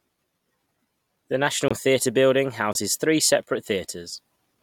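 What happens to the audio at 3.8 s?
Nothing goes wrong at 3.8 s; the speech continues there without any dropout, glitch or distortion.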